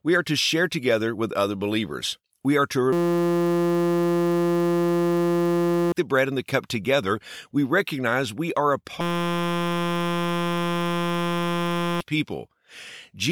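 At 2.93 s, after "are to", the system froze while the sound hardware kept replaying a 5.8 ms ring buffer (which fits 256 samples). This system hang loop buzzes steadily at 172 Hz until 5.92 s, where "the bread and the" follows. It recurs from 9.01 to 12.01 s, after "recognize we are a".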